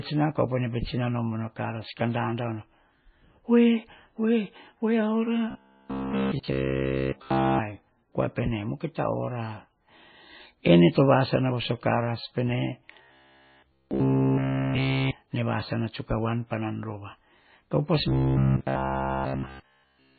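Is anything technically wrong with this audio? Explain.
Yes. Throughout, the speech shows heavy damage that is likely from MP3 compression at a very low bitrate, around 17 kbps. Weak frequency lines are dropped frame to frame, nothing remains above 4.6 kHz, and the sound is watery and dull.

From 5.51 to 7.61 s, 13.03 to 15.11 s and 18.08 to 20.18 s there is robotic sound from repeated short buffers. All the audio in these stretches is a short segment played over and over, likely because new audio arrived too late. The repeats form a rigid 66.7 Hz buzz, which fits a 15 ms buffer.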